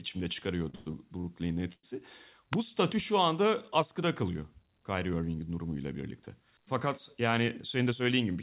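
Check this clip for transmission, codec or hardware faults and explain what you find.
Four faults are audible, all within a call signal whose bandwidth stops at 4 kHz, which fits a narrowband G.711 A-law path at 64 kbps.

Repeated stalls (stutter) run from 0.70 to 1.25 s. Packets arrived late or slower than playout, so the jitter buffer emptied four separate times. Each time the receiver stretched the last sound to cover the wait, 172 ms in total, with the longest hold at 106 ms. About a third of that half-second is concealment, so the speech drags and stutters, though nothing is lost.

A call audio freeze occurs between 1.73 and 1.85 s. The receiver stalls for 102 ms, most likely because packets were held up in transit and the buffer ran dry. The last sound is extended and fades into roughly 60 ms of silence. The speech then resumes where it stopped, so the freeze inserts a pause rather than removing any material.

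An electrical switching spike appears at 2.53 s. It is a sharp impulse lasting about 2 ms, layered on top of the speech. It is likely an arc from a nearby switch, motor or static discharge that was picked up on the audio line as a brief impulse, independent of the signal itself.

A jitter buffer speed-up runs from 7.79 to 8.37 s. The buffer was holding more audio than its target, so the receiver trimmed short pitch-period segments repeatedly, removing about 70 ms in total. Playback runs at roughly 109% of normal speed while the pitch stays the same, so the final stretch of speech sounds hurried.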